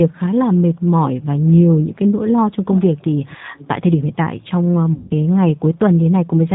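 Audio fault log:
throughout: G.729 codec. The whole clip passes through this 8 kbit/s coder, which rebuilds speech from a vocal tract filter, a pitch predictor and a few pulses per frame, so the voice sounds plainly rough and synthetic, with nothing above 4 kHz.
2.74–3.04 s, 3.25–3.68 s and 4.44–4.48 s: echo leak. A delayed copy of the speech trails it by about 0.28 s, fairly audible in the first stretch, fainter in the second and barely there in the third. The likely cause is a far-end loudspeaker whose echo canceller left residue.
4.94–5.11 s: VoIP packet loss concealed by the speech codec. About 160 ms of audio is missing, which fits eight lost packets. The decoder extends the last pitch and filter, stretching the sound into a buzzy tone or coloured noise that fades, and the speech stays weakened until the frames recover.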